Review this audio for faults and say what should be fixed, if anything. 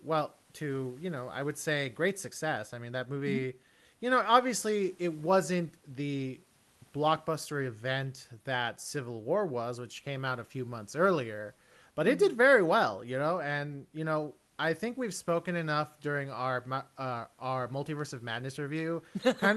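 Nothing needs fixing: the speech shows the expected character of a WebRTC call path, with a top end reaching about 12 kHz that fits Opus at around 32 kbps, and a room noise floor sitting about 39 dB below the speech.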